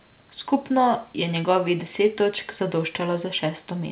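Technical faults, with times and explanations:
No technical faults can be heard in this speech.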